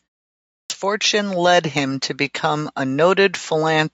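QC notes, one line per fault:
0.29 s to end: automatic gain rising. The level climbs steadily by about 6 dB over more than three seconds, with voice and background swelling together, because the gain control judged the input too quiet and kept raising its gain.
0.45 to 0.70 s: clipped start after a pause. After 0.45 s of silence, speech begins abruptly, missing about 250 ms of its onset, because the output device dropped into sleep during the pause and needed that time to wake and lock again.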